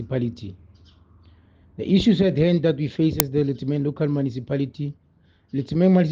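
At 3.20 s there is an uninitialised buffer: one block was sent to the output before any audio had been written into it, so whatever stale values sat in that memory were played as samples. The result is a loud crack lasting about 2.7 ms, which fits a 128-sample buffer. Unlike a dropout, which briefly goes silent, or a simple click from a waveform discontinuity, this inserts leftover memory content heard as a loud crack.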